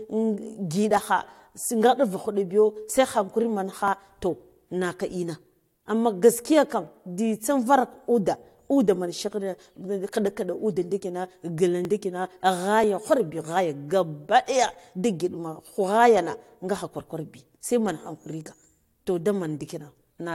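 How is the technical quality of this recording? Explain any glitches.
Six tiny skips break up the speech, each a brief skip where a sliver of sound is missing and the waveform jumps abruptly. They fall at 0.91, 2.90, 3.88, 6.87, 11.85 and 12.84 s. This is overlap between stream segments. The audio arrives in 1-second chunks, and where the timestamps of adjoining chunks overlap, the player trims the overlap even though that sound wasn't actually duplicated. Each time, about 5 to 15 ms disappears.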